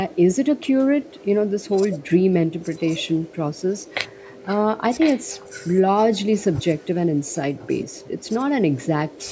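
Echo leak at 2.76–4.43, 4.99–5.67, 6.38–6.86 and 7.29–8.28 s: a copy of the speech roughly 15 to 30 dB below it, trailing 1.05 s behind, strongest around 5 s. It's likely a speakerphone echo canceller letting some through.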